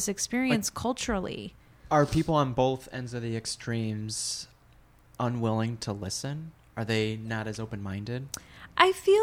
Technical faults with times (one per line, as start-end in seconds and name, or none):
none